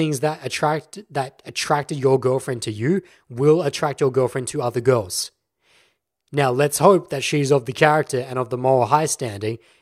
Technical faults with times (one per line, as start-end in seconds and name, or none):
none